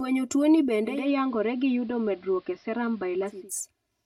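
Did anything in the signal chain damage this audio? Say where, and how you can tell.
Yes. The whole clip sounds hollow and phasey: one channel lags by roughly 3 ms before the mono sum, giving channel delay comb filtering with notches starting around 150 Hz.

From 0.84 to 3.51 s there's digital radio blending to analogue. The receiver cross-fades over about 254 ms to AM, and faint hiss appears, while the level stays the same.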